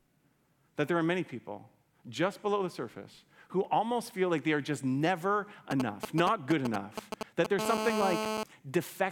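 From 5.71 to 7.47 s, GSM signalling bursts: a nearby phone's rectified radio pulses give galloping ticks and short 217 Hz buzzes, about as loud as the speech, not continuous. From 7.59 to 8.43 s comes GSM phone buzz, a steady, raspy 217 Hz tone rich in harmonics, about 2 dB below the speech, unbroken as during a call.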